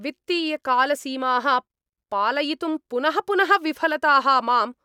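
No technical faults are audible anywhere in this speech recording.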